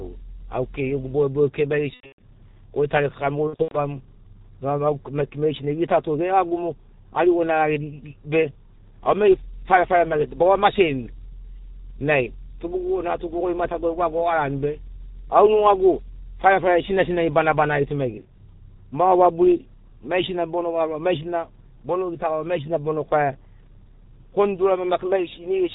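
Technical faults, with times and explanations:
throughout: G.723.1 codec. The audio passes through a very low-rate telephony coder whose 30 ms frames and slow voice-model updates suit its 6.3 kbit/s mode. Nothing above 4 kHz survives, so the speech is muffled. Because the coder's model of the voice trails behind the real changes, the damage is heavy: voicing turns hoarse and rough, and consonants smear into one another instead of landing crisply.
1.94–2.19 s and 3.47–3.78 s: VoIP packet loss concealed by the speech codec. In each window, packets went missing in scattered bursts. About 210 ms was lost across 240 ms in the first, with the longest gap 120 ms. In the second, 180 ms was lost across 240 ms, with the longest gap 90 ms. The decoder filled each gap by repeating its last pitch and filter at falling gain. That produces a stretched, buzzy tone or coloured noise that fades, and a weak, distorted voice just after each gap while the decoder recovers.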